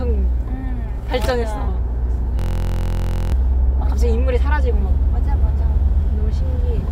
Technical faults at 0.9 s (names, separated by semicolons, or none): none